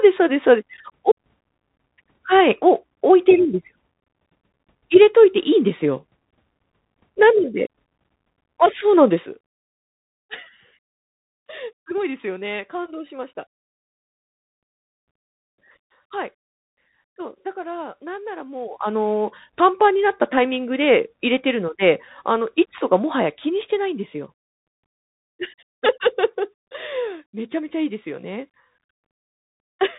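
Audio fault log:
Throughout: Bluetooth CVSD headset codec. The speech has been squeezed through the narrowband Bluetooth link, which encodes each sample as a single up-or-down bit at 64 kHz with an adaptive step, and the damage is plainly audible. Nothing passes above about 3.8 kHz, so the band cut alone marks it as a headset path. What separates it from simple low-pass filtering is the granular hiss riding under the speech, the scratchy s sounds, and the roughness on loud bright passages where the step size cannot keep up.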